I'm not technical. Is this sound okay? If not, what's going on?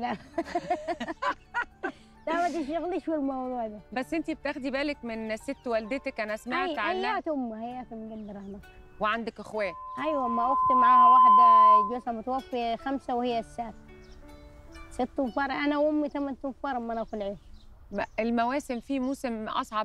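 No. Loudspeaker feedback squeal runs from 9.58 to 12.04 seconds: a microphone picks up its own loudspeaker, and that loop keeps amplifying one pitch near 1 kHz. It swells over about a second and a half into a loud, piercing whistle.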